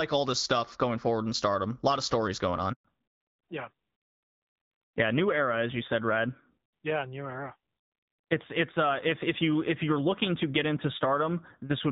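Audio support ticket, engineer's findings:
Handover gap at 2.73 to 2.85 s. Speech cuts out for 120 ms. It fades within a few tens of milliseconds, then goes silent. Probable component: network handover. No speech frames arrived while the call switched links. That stretch of audio is lost.

Fallback to narrowband from 2.85 s to end. Everything above 4 kHz vanishes. Speech turns duller and rougher. Probable component: codec renegotiation after the handover. Before the break, the sound fits HD Voice AMR-WB at 12.65 kbit/s, with light coding damage. After it, it fits AMR-NB at 7.4 kbit/s.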